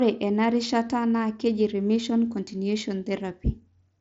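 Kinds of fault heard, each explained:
No faults are present; the speech comes over a wideband Bluetooth headset link using the mSBC codec at 61 kbps, so its content stops at about 7.8 kHz, with light coding grain on the louder passages.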